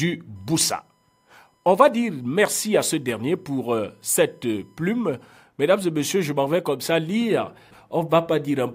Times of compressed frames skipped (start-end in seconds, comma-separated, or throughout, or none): none